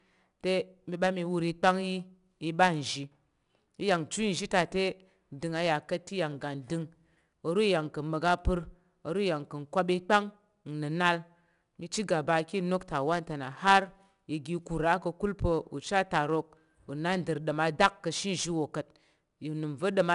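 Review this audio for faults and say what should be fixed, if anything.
The speech carries 4-bit ADPCM compression across its full length. Each sample is coded as a coarse 4-bit step from a prediction, so the quantisation error appears as a plainly audible gritty hiss that rises and falls with the speech. This sets it apart from steady background noise, which would remain in the pauses, and from perceptual-codec warbling. Nothing is present above about 10.6 kHz, which fits a roughly 22 kHz sample rate and a data rate near 89 kbps. To prevent it, store or transmit the speech as PCM or with a modern codec at a full sample rate.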